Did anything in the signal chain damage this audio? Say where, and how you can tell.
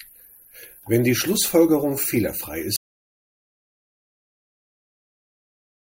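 Yes. At 2.76 s the speech cuts off mid-flow and the rest of the clip is digital silence, with no room tone at all: an audio dropout to silence. The likely cause is a lost input link or device, with the recorder still writing zeros.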